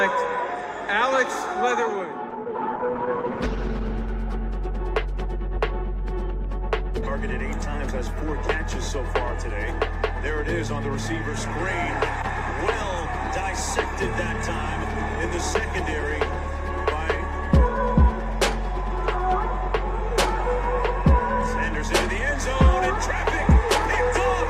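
The audio has a call bitrate drop from 2.31 s to 4.15 s. For about 1.8 s the sound turns rough and watery, which fits the encoder being pushed from around 48 kbps down to roughly 14 kbps after the call's bandwidth estimate fell, forcing much coarser coding. Unlike packet loss, it has no gaps, clicks or repeated fragments. The audio keeps flowing with thinner detail, then regains its clarity as the bitrate recovers.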